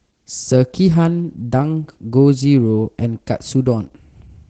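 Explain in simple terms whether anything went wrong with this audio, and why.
Opus voice compression, audible for the whole clip, makes the speech sound muffled, slightly hoarse and a little robotic. The speech coder discards the top of the sound and rebuilds the voice from a coarse model. Simple treble loss would sound dull but not robotic.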